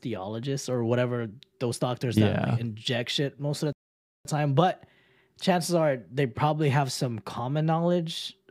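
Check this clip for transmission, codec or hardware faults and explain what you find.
There is one fault, a playback stall. At 3.73 s, right after "shit most of the", the speech cuts to silence for 0.53 s before resuming at 4.25 s, likely because the player ran short of data or its thread was blocked.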